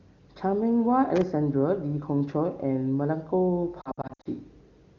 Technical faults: loose connector crackle; lost AMR speech frames

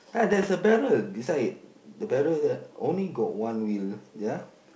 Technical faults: bit errors on an ADPCM link

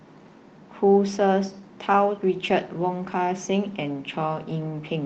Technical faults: lost packet rebuilt from error correction

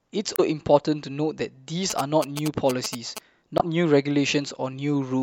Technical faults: damaged data in a compressed stream; GSM signalling bursts

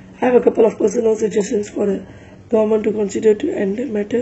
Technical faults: adaptive stream starting at a low bitrate

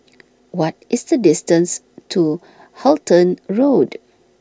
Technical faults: none

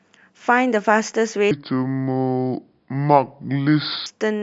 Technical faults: wrong sample rate

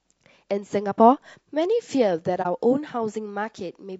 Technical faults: low-delay AAC compression; AAC frame loss with muting

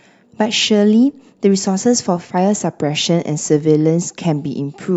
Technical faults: none

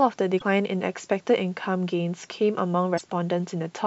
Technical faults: damaged data in a compressed stream

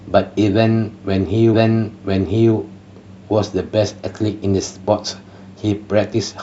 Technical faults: stream segment repeated

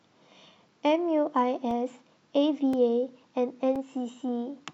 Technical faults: periodic USB or driver dropouts

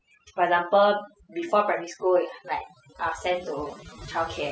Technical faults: overdone noise removal

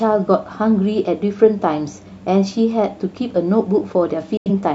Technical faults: digital broadcast dropout

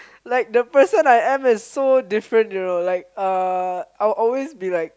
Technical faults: none

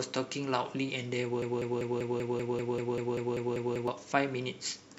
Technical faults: broken-record loop

